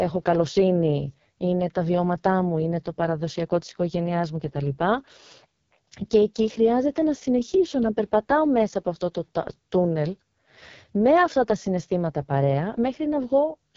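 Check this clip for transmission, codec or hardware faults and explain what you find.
The speech carries an AMR wideband (HD Voice) codec fault for its whole length, with heavy codec damage. AMR-WB models the vocal tract and drives it with coded pulses up to 6.4 kHz, then fills the band above that with shaped noise. Nothing is present above about 7.3 kHz. The speech sounds rough and raspy, with a gritty edge and a hissy top band. This fits the codec's lowest 6.6 kbit/s mode.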